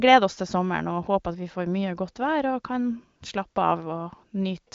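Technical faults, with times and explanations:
No technical faults can be heard in this clip.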